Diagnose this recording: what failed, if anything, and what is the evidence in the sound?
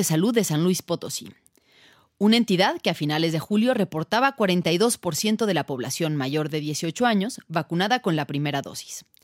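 GSM signalling bursts got into the analogue wiring from 3.21 to 5.19 s: a galloping dit-dit-dit of short buzzes at 217 Hz, well under the speech, from a nearby phone's radio bursts rectified in the circuit.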